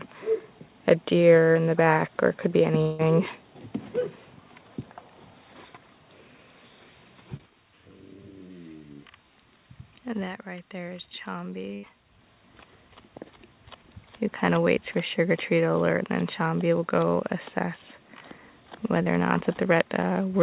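Throughout, the call path leaves nothing above 4 kHz, which fits G.711 A-law at 64 kbps.

At 1.52 s, 7.37 s and 19.03 s there are three short concealed packet losses. Each time about 30 ms of audio never reached the decoder, so the receiver extended the preceding sound and then blended back. Each is heard as a brief smear or wobble. A waveform shows repeated cycles, and a spectrogram shows a short blurred patch.

From 2.81 to 3.02 s, about 180 ms of audio is missing, with the likely cause a long network dropout. The gap is filled by roughly 0.18 s of continued buzz or hiss that fades but never reaches silence, and the audio resumes further on. A spectrogram shows frozen, dimming harmonics or noise with no blank gap.

At 11.74–11.86 s, a burst of packet loss leaves a 90 ms hole. The receiver continues the last sound at a falling level, as a held buzz or fading hiss, then picks up past 90 ms of lost audio. 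On a waveform, the amplitude tapers across repeated cycles.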